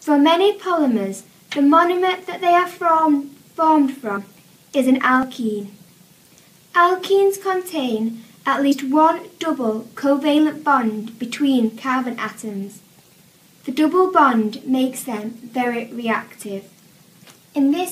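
Compressed frames are skipped at 4.14–4.18 s, 5.20–5.24 s and 8.71–8.73 s. The audio jumps ahead about 50, 50 and 70 ms.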